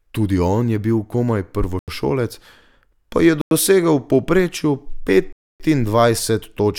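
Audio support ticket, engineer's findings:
Speech drops to silence three times. Dropouts at 1.79–1.88 s (87 ms), 3.41–3.51 s (98 ms), 5.33–5.60 s (272 ms, longest). Each gap is silent, and the sound then resumes. Probable component: wireless link to headphones. Likely Bluetooth stall. Radio interference delays packets, the headphone buffer empties, and playback halts until retransmitted audio arrives. The varying gap lengths track how long each delay lasted.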